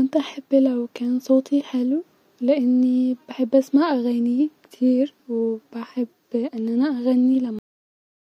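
At 7.59 s the speech suffers a cut-off end: the final stretch of audio was never written out or played, so the sound stops mid-utterance rather than finishing. It drops straight to digital silence with no natural decay, and that silence holds for the remaining 0.64 s. On a waveform the signal ends abruptly mid-sound and becomes a flat line; a spectrogram shows the energy ending in a clean vertical edge, followed by empty black.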